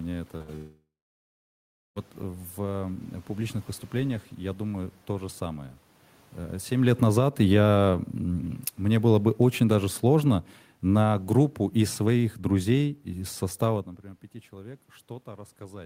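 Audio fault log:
0.37–0.42 s, short concealed packet loss: About 20 ms of speech never reached the decoder in time, so the receiver filled a gap of roughly 24 ms by extending the sound just before it and then blended back into the real signal. The result is a brief smear or wobble right at the opening of the clip.
0.42–0.50 s, burst of packet loss: Immediately after, a run of consecutive packets totalling about 60 ms failed to arrive. The receiver again continued the last sound for about 59 ms, turning it down as it went, so a voiced sound becomes a short held buzz and an unvoiced one a fading hiss. The speech then picks up further along, with the missing 60 ms simply gone.
0.56–1.98 s, long network dropout: Here the audio stops for about 1.4 s, which is likely a network dropout with no packets getting through. The receiver briefly stretches the last sound into a decaying buzz or hiss, and that fades out. 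For roughly the final 1.1 s only silence or the low room noise remains. When speech returns near 1.98 s, it resumes later in the utterance, and the stretch in between is never heard.
6.70–13.89 s, automatic gain falling: The automatic gain control judged the input too loud or its background noise too strong and lowered its gain gradually over about 7 s, by about 13 dB in total. The speech therefore starts full and then sinks steadily, with the room's background noise sinking along with it. That shared drop is what separates it from the talker moving near 6.5 s and 13.5 s, where only the voice level shifts and the room noise stays put.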